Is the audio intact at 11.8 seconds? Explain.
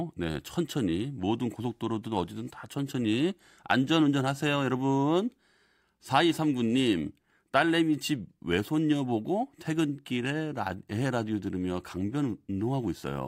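Yes, at 11.8 seconds the speech carries on cleanly, with no dropout, click, distortion or other fault to be heard.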